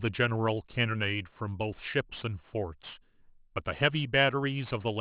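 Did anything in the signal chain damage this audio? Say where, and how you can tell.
Yes, aliasing throughout the speech at the sample-rate conversion: unfiltered content above 4 kHz folds back as gritty sibilants, roughly 25 dB down, consistent with a 24 kHz to 8 kHz drop.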